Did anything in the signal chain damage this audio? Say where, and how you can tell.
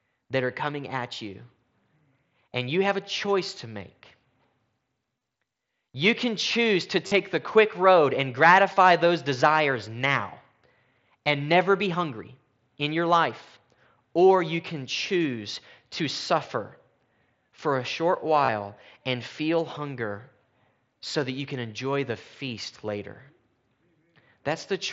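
Yes. Concealed Bluetooth headset packet loss on the wireless link, at 5.19–5.21, 7.07–7.12 (after "can choose to"), 8.74–8.77, 18.45–18.49 and 22.47 s. The receiver filled each gap with repeated recent waveform, heard as brief buzzy holds that warble as the speech resumes, except the single lost frame at 22.47 s, which is nearly hidden.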